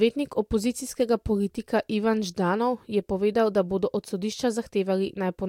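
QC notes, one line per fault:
No technical faults can be heard anywhere in the speech signal.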